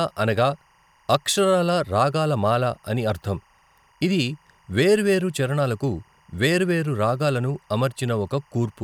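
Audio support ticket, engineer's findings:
Timecode bleed for the whole clip: faint chirping warble near 1 and 2 kHz, around 40 dB under the speech. LTC at 23.976 fps leaking from an adjacent track or cable.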